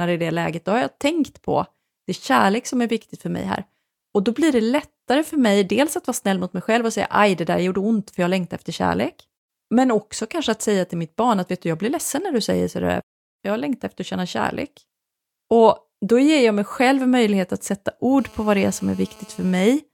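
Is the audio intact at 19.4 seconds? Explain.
No. GSM phone buzz runs from 18.19 to 19.64 s. A nearby 2G phone on a call transmits in bursts 217 times a second, and the audio circuitry rectifies those radio pulses into a steady, raspy 217 Hz buzz with many harmonics, about 27 dB below the speech.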